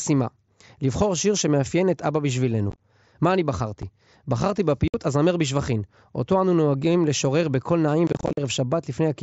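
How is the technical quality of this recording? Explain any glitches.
The recording has repeated dropouts from unconcealed Bluetooth headset packet loss, heard through the wideband mSBC headset link. Short voice packets from the headset never arrived, and silence replaced them without any smoothing. At 2.70 to 2.80 s, scattered holes chop the speech. A single tiny gap falls at 3.82 s. A solid 60 ms hole falls at 4.88 to 4.94 s. At 8.07 to 8.38 s, gaps up to 45 ms leave the speech rough and crackly.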